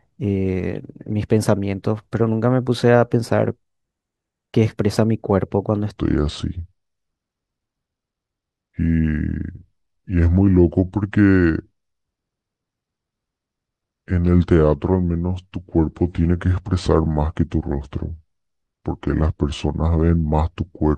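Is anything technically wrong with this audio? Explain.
Yes. From 5.97 s to the end there is a section at the wrong speed. The speech plays at 0.736 times its recorded rate, so it becomes slower and drops by roughly five semitones, sounding deep and drawn out. The likely cause is playback or editing against a mismatched clock, which shifts speed and pitch together. On a spectrogram, harmonics and formant bands step lower at 5.97 s and syllables widen. In the waveform, the bursts spread further apart in time.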